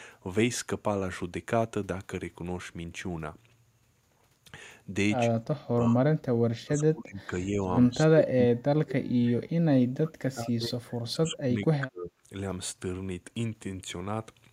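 Speech, with speech suppressed in double talk at 5.34 to 6.06 s, 6.44 to 7.62 s and 7.89 to 12.13 s. The voice dips by up to about 35 dB. The likely cause is an echo canceller muting near speech during overlapping talk.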